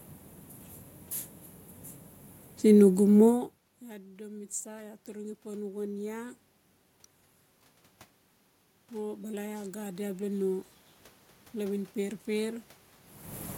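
Around 3.5 s the talker moves away, and from 4.16 to 6.39 s automatic gain rising follows: the input fell by about 24 dB, so the control lifts gain about 5 dB, swelling voice and room noise together. It repeats from 8.89 to 10.69 s, where the waveform envelope and the spectrogram's noise floor brighten slowly.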